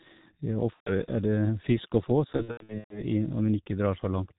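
Speech squeezed through the G.723.1 codec, muffled and hoarse with smeared consonants and nothing above 4 kHz, which fits a roughly 6 kbit/s stream. There's VoIP packet loss concealed by the speech codec at 0.74–0.91 s, and again scattered across 2.36–3.03 s, where the decoder stretches the last sound into a fading buzzy tone or coloured noise.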